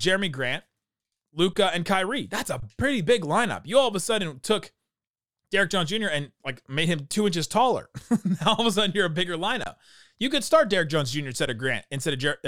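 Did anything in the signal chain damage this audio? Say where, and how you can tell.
Yes, at the driver or buffer stage: an underrun with held sample. The speech goes flat for 23 ms at 1.53, 2.60 and 9.64 s, fitting a 1024-sample buffer, and for 8 ms at 11.46 s. The converter held its last value, and nothing was skipped, so each resumes softly.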